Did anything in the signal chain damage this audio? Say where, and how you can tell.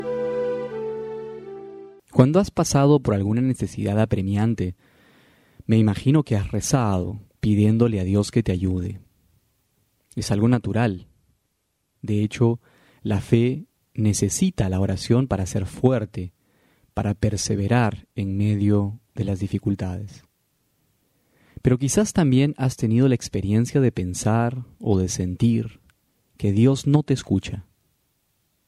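No, the signal chain shows no damage.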